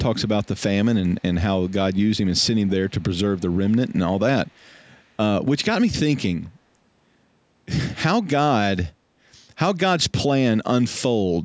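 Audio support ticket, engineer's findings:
Echo leak: faint delayed copy of the speech, 192 ms behind, at 1.68–1.72, 1.93–1.99, 2.67–3.03, 3.35–3.71, 3.88–3.93 and 4.46–4.88 s. Likely a far-end echo canceller passing loudspeaker pickup. Loudest across 2.67–3.71 s.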